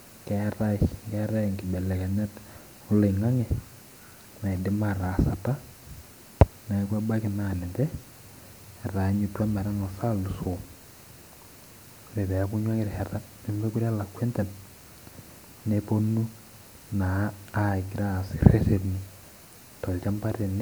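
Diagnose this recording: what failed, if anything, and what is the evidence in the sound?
Nothing failed in this recording, and the sound gives no evidence of any fault.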